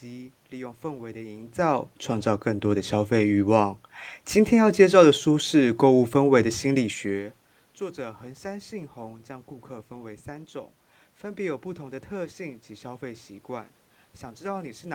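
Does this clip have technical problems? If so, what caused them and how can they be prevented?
No, this clip has no technical problems, so there is nothing to prevent.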